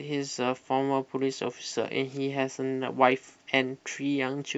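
Speech recording with no audible technical faults: no dropouts, level problems, distortion or timing errors anywhere in the clip.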